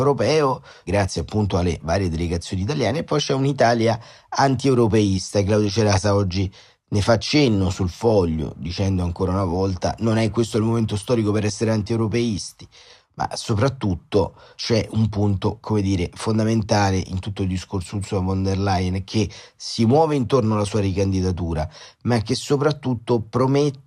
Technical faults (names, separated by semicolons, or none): none